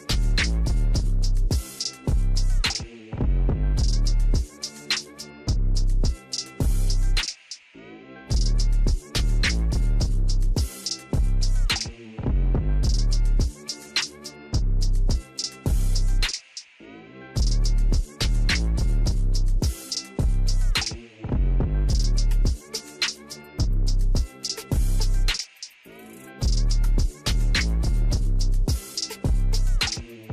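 Throughout the audio, a dull top end, flickering upper bands and gurgling, granular distortion point to likely MP2 compression at a low bitrate near 80 kbps; unlike a steady low-pass, the high bands switch on and off.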